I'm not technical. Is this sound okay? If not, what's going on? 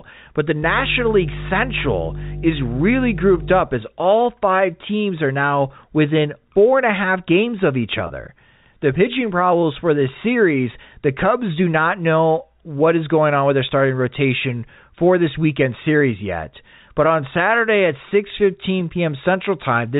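No. From 0.63 to 3.61 seconds a steady, fairly loud low drone sits under the speech. That is mains hum: electricity from the power supply leaking into the recording, here at 50 Hz, typically through a grounding problem or a nearby transformer.

Twice the speech briefly snags with a short buzzy, held sound: at 8.07 to 8.10 seconds and at 18.09 to 18.11 seconds. This is packet loss with pitch repetition. About 30 ms and then 20 ms of audio went missing in transmission, and the receiving end covered each gap by repeating the last bit of voice. The phone-line quality of the whole clip, with its muffled top end, comes from ordinary G.711 telephone coding.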